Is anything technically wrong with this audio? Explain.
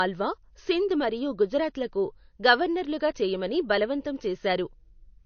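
Yes: throughout, there's nothing above 6.6 kHz, so it sounds dull. It's likely low-bitrate audio saved at a high bitrate, keeping the earlier loss.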